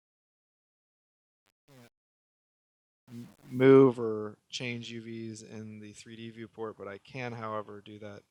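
From the start to about 3.64 s, the fade-in sounds gritty before the level builds. This is truncation distortion on a fade: the gain stage kept only 8 bits without dither, turning the low-level waveform into coarse steps.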